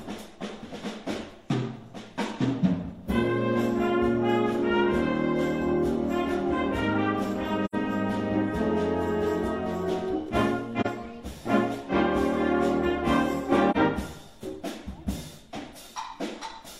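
At 7.64 s, 10.80 s and 13.71 s the sound drops into short, soft-edged gaps: AAC frame loss with muting. The first gap lasts about 85 ms, which fits two lost frames, and the others about 43 ms each. The zeroed spectrum shows as blank vertical bands on a spectrogram, and as tapered dips in the waveform.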